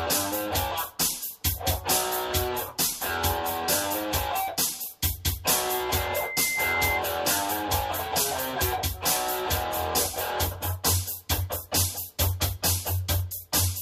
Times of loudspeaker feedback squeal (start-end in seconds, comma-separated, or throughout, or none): 5.67-7.03